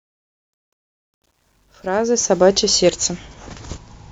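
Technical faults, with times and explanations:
0.00–2.47 s, truncation distortion on a fade: an undithered fade-in stage, which fits 11-bit resolution, turns the quietest stretch, 0.00–1.49 s, into gritty steps.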